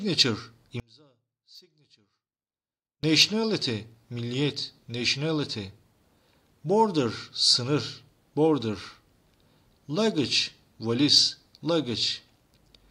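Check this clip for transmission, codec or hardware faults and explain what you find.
One fault shows up. From 0.80 to 3.03 s the sound drops by about 34 dB to a faint residue. The likely cause is one channel inverted, so the shared content cancels when the two channels are summed to mono.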